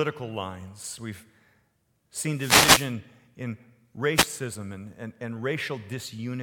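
Two wireless microphone noise hits occur, from 2.33 to 2.94 s and from 4.14 to 4.28 s. Each time the FM radio link fades and receiver static swishes over the speech. Unlike a digital dropout, the voice isn't cut to silence.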